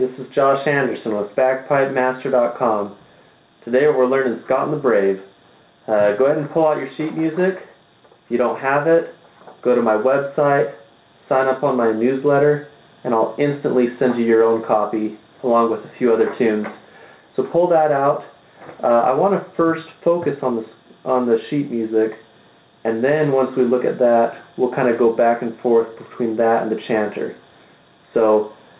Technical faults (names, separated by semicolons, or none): gain pumping